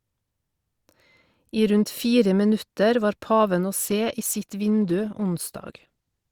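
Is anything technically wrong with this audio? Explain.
Yes. From 3.79 s, right after "minutter var paven å", to the end of the clip, the audio switches to an adaptive stream at a lower bitrate. The connection slowed, so the player chose a leaner version. Quality drops suddenly, with no gap, and codec artefacts rise. This fits a step from Opus at 64 kbit/s down to 16 kbit/s.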